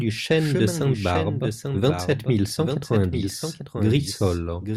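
A doubled audio track runs throughout the speech: a second, full-band copy trails the original by about a second, only a few decibels quieter, with no decay or room colour. It is likely a duplicate capture through a slower path mixed back in.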